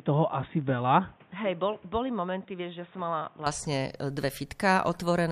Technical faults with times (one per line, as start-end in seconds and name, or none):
0.00-3.46 input switched to a poorer device